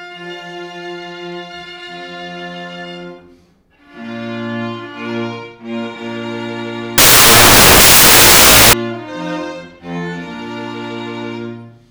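From 6.98 to 8.73 s the sound is swamped by loud, harsh broadband noise. These are samples built from the wrong bytes: misordered or misaligned bytes turn the rapidly changing low bits into each value's dominant part.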